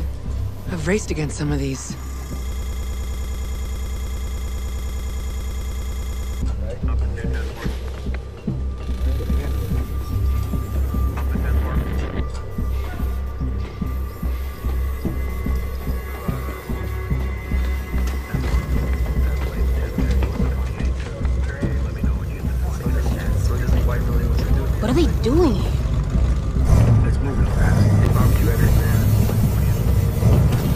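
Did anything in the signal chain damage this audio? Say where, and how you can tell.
Yes: a broken-record loop from 2.52 to 6.42 s, where a 0.10 s fragment repeats 38 times, likely from a stalled playback buffer resending its last block.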